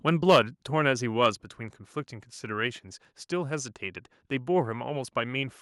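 Microphone overload from 0.08 to 0.39 s: the loudest peaks sound flattened and harsh, with a crackling edge. The likely cause is an input level set about 6 dB too high, so that a small share of samples hit the converter's ceiling and had their tops cut off.

Microphone volume stepped down at 0.36 s and again at 1.35 s: the speech and background both drop abruptly by about 3 dB each time. This is likely the call software reacting to a microphone that was too loud or clipping by lowering the device's input gain in single steps.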